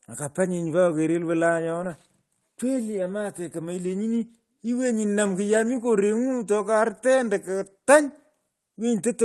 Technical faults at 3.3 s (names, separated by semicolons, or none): none